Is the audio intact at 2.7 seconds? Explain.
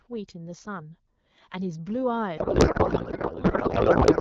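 No. From 2.37 s to the end, a codec payload misread turns the speech into garbled, warbling noise: octet-aligned AMR-WB frames are being read as bandwidth-efficient, so every field is misplaced.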